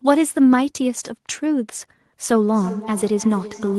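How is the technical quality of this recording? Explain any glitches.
The recording has one glitch, in the speech from 2.36 s to the end.

Feedback echo between two devices: a second device in the room on the same call replays this microphone's signal, the microphone captures it again, and no echo canceller removes the other device's playback. The speech returns roughly every 0.3 s, thin and ringing, about 17 dB below the speech.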